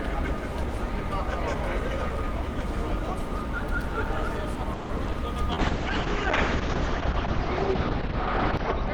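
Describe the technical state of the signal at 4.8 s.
At 4.8 s the signal is inside a stretch of repeated packet loss (robotic sound), running from 4.73 to 5.15 s. Packets kept arriving late or not at all, and each hole was covered by extending the last received sound, so roughly half the span is synthetic fill. The gaps reach up to 160 ms, and the result is choppy audio with pieces missing.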